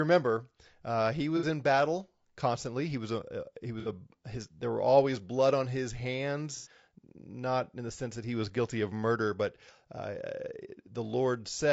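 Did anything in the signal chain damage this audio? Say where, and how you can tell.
Yes. Low-delay AAC compression runs throughout the speech. It sounds rough and grainy, with noise between the harmonics and a thin, synthetic top. This likely comes from AAC-ELD at around 32 kbps, where short codec frames resolve pitch poorly and run short of bits.

AAC frame loss with concealment occurs at 1.37–1.45 s (between "remember uh he" and "in battle constantly"), 3.80–3.88 s, and 6.56–6.68 s (before "not in the sense"). Each is a smeared, noisy patch where the decoder rebuilt the missing frames from the last good spectrum.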